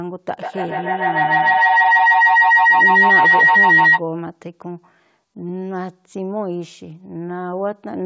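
Feedback howl runs from 0.35 to 4.04 s: sound from a loudspeaker re-enters a microphone in the same room, and each trip round the loop comes back louder rather than quieter. The repeats pile up and narrow onto a tone of about 2 kHz, with repeats roughly every 150 ms, the loop's round-trip delay. It peaks at about 13 dB above the speech before the loop breaks. Nothing above 8 kHz is present, which fits a G.722 wideband call codec.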